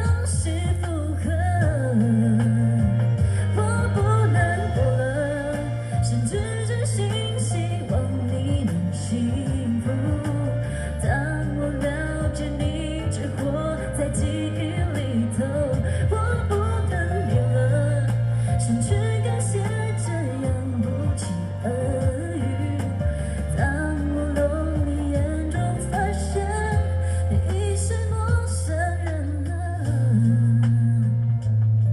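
Nothing in this recording stands out as a technical problem, so there's really nothing here to flag.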